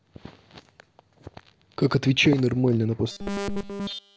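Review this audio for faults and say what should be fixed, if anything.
Robotic sound from repeated short buffers, 3.12 to 4.17 s: the speech becomes a rigid metallic 200 Hz buzz throughout, likely from a single 5 ms buffer looping while fresh audio is skipped. To prevent it, enlarge the jitter or playback buffer and fix the upstream delivery stall so new audio arrives on time.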